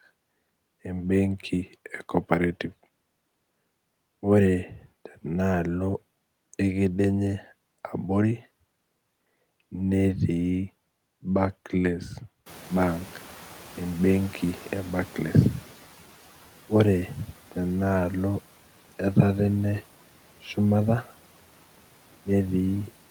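At 12.46 s the room noise jumps by about 21 dB, and the noise suppressor is caught lagging: its noise estimate takes 3.37 s to catch up. Until 15.83 s the noise passes through with less reduction, then sinks by about 8 dB once the suppressor adapts.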